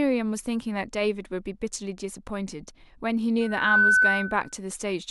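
A microphone picked up the loudspeaker it was driving, and at 1.5 kHz the loop gain passed one, so loudspeaker feedback squeal sets in at 3.41 s. The tone swells over roughly a third of a second to around 10 dB above the speech, holding until 4.54 s.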